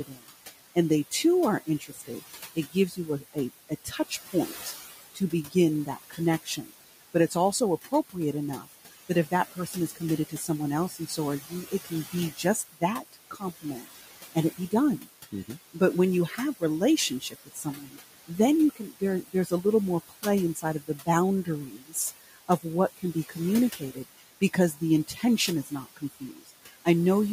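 Noise suppressor artifacts run through the whole clip: the room noise, sitting about 14 dB under the speech, gets pulled down by about 15 dB between phrases and swells back under them. The suppressor also cuts speech, mistaking quiet bits of it for noise, from 0.06 to 8.75 s (dips of up to about 18 dB), 9.31 to 16.62 s (up to about 15 dB) and 17.2 to 26.86 s (up to about 18 dB). Soft consonants and word endings sound swallowed across a second or two in each stretch.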